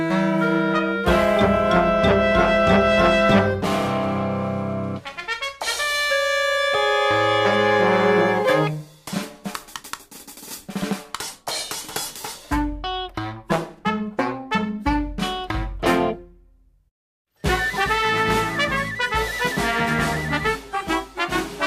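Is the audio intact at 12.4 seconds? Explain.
Yes, the audio is intact at 12.4 seconds, with no dropout, click, distortion or other fault to be heard at that point.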